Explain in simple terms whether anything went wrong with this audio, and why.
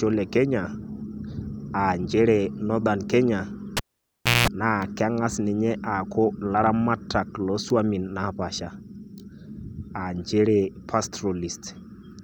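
At 3.77 seconds a cable was pulled and plugged in while the speech was running. First there is a pop. Then the sound almost disappears for about 0.66 seconds, because nothing is connected. As the plug goes back in, only its tip touches at first. That picks up the building's electrical wiring as a 60 Hz mains buzz for about 0.2 seconds. A second pop follows, and the speech returns at 4.48 seconds.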